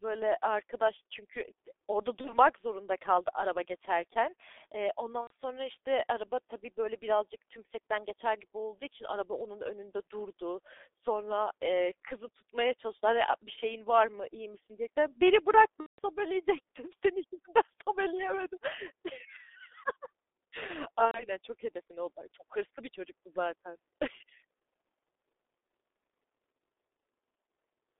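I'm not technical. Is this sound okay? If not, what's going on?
No. Two things are wrong with this speech recording.

G.723.1 codec, throughout: the whole clip went through an old internet-phone compression method that squeezes the voice into a very small amount of data. It keeps only a narrow slice of sound, from about 300 Hz to 3.6 kHz, and tracks the voice only coarsely. That is why everything sounds muffled, rough and hoarse, and why sharp consonants are smeared.

VoIP packet loss concealed by the speech codec, at four moments: 2.21 to 2.37 s (between "arkadaş çünkü d orada" and "zorunda kaldı araba geçerken"), 5.21 to 5.30 s (after "kaldı araba geçerken eee", before "sonra işte araba tabii"), 15.80 to 15.99 s, and 21.05 to 21.27 s (just before "çok hedefine odaklı çok"). Small pieces of the call never arrived. The receiver filled each gap by stretching the last sound it had, so you hear a brief buzzy or hissy smear that fades instead of real speech. 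The voice stays weak or warped for a moment after each gap.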